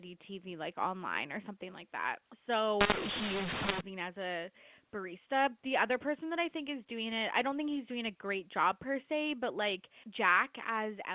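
Speech over a G.711 telephone path, band-limited below 4 kHz. From 2.81 to 3.81 s, just before "as a barista the", it turns harsh and gritty with hiss filling the quiet bits. That's mu-law and A-law mixed up: A-law samples decoded as mu-law, scrambling levels and lifting near-silence.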